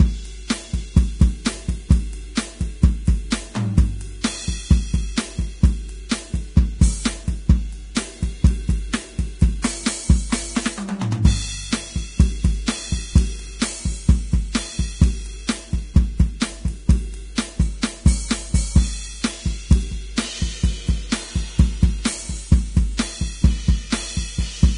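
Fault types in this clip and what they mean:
Vorbis compression: nothing above 10.6 kHz, with hissy, grainy treble and roughened tones throughout, likely heavy Vorbis coding at a low bitrate around 31 kbps.
pre-echo: at 7.95 s, a brief hiss spread over about 15 ms precedes a sharp attack, as block quantisation noise fills the quiet moment before it.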